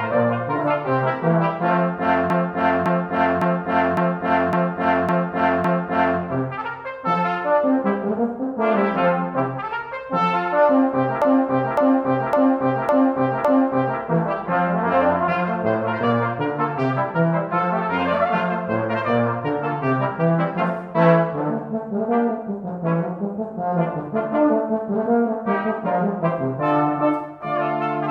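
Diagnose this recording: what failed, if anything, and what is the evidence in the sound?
Repeated frames, 2.30 to 6.20 s and 11.22 to 14.00 s, at the codec or storage stage. A 0.56 s block stutters through seven extra plays, then five. This fits about six compressed frames being duplicated. It lengthens the audio by 3.9 s and 2.8 s.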